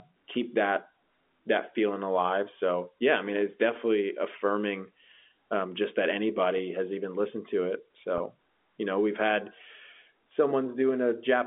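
Packet loss with pitch repetition hits this speech at 6.58 s and from 8.18 to 8.20 s. The receiver repeats the last pitch period across 10 ms and 20 ms gaps, producing brief buzzy holds.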